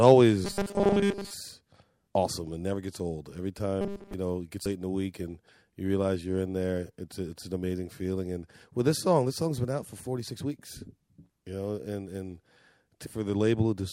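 The audio has two separate problems. From 0.45 to 1.34 s, and again from 3.81 to 4.14 s, it turns into a rigid, metallic robotic buzz pinned at 200 Hz. That's the robotic sound from repeated short buffers: new audio is likely arriving too slowly, so the last 5 ms keep getting replayed while much of the real material is skipped. The 5 ms period is what fixes the 200 Hz drone. Then there are three brief blips, at 4.65 s, from 10.25 to 10.28 s, and at 13.05 s. Those sound like damaged data in a compressed stream. The decoder hits corrupted frames, loses sync, spits out a short glitch and picks up again at the next good frame header.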